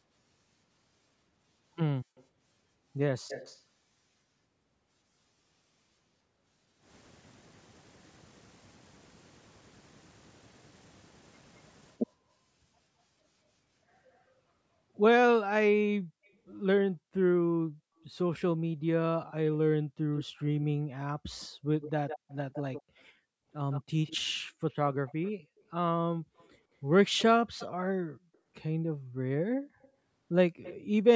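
Speech suppressed in double talk comes first, from 2.04 to 2.15 s: with both sides talking, the echo canceller likely could not tell its own talker from the loudspeaker echo and ducked everything, so the speech drops by roughly 40 dB for about a tenth of a second. An echo leak follows from 2.16 to 2.24 s, likely from an echo canceller on a loudspeaker side failing to remove what its microphone picked up. It is a faint copy of the speech delayed by 136 ms, about 35 dB below it. The suppression returns briefly from 3.22 to 3.28 s, followed by a louder leak from 3.28 to 3.62 s, delayed 218 ms at about 15 dB down. From 15.31 to 30.91 s the double-talk suppression keeps cutting in, chopping about 7 s of speech in deep dips. Inside that stretch the echo leak runs from 20.16 to 28.37 s, delayed 160 ms at about 15 dB down, and again from 29.82 to 30.75 s at 160 ms, about 20 dB down.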